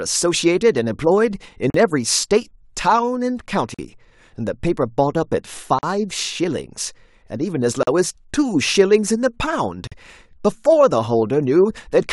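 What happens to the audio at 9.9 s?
At 9.87 to 9.92 s the speech drops out for about 43 ms, a gap at a join of encoded pieces. Separately encoded segments were spliced without trimming their padding, so encoder delay and last-frame fill leave silence. On a waveform it's a flat notch; a spectrogram shows a blank vertical strip with blurred edges, recurring every 2.0 s.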